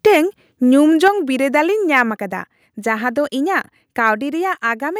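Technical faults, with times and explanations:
0.06–0.17 s, 1.05–1.08 s and 1.96–2.01 s, microphone overload: the loudest speech peaks turn harsh and crackly, most clearly at 1.05 s, where roughly a tenth of the samples are flattened, against a small share in the other two bursts. The signal was pushing about 1 to 3 dB past the converter's limit, likely because the microphone input volume was set too high. On a waveform the peaks show flat, squared-off tops, and a spectrogram shows bright broadband smears reaching up into the high kHz range.
0.07 s, 1.08 s and 2.10 s, microphone volume stepped down: each time, the speech and the background noise floor drop in level together in a single step, by about 2 dB, then about 4 dB, then about 2 dB. The first drop comes during the first overload burst, the second right on the back of the second burst, and the third follows about 0.1 s after the last one, which points to call software likely cutting the device's input volume after detecting clipping. 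The waveform's envelope narrows abruptly at each point, and the spectrogram darkens evenly across all frequencies.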